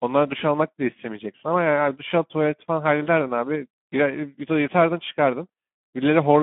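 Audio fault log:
Throughout: Speex codec damage, plainly audible. The speech sits in a phone-line band of roughly 150 Hz to 3.4 kHz with nothing above 3.7 kHz, and the starved CELP excitation leaves a hoarse, noisy grain that fits a bitrate around 11 kbps.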